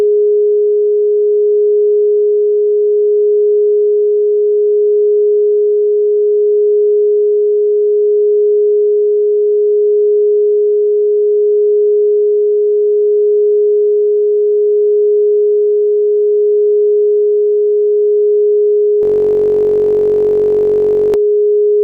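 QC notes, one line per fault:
19.03–21.14 s, system hang loop. The playback froze while the hardware kept replaying one 21.33 ms slice of the ring buffer, which fits a 1024-sample buffer. It repeats close to a hundred times. The short loop fuses into a steady buzz at 46.9 Hz.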